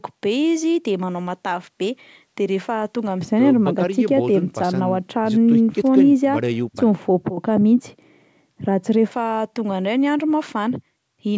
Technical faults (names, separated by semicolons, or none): de-emphasis applied wrongly